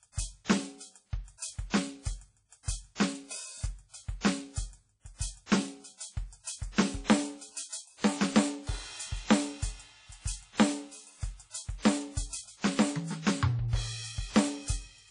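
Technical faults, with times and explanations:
Throughout: WMA compression. The music sounds washy and ringing, with hiss that swells and fades with the signal, and nothing is present above 10.1 kHz. The likely cause is a transform codec at a low bitrate, consistent with about 32 kbps, spreading quantisation noise across long blocks.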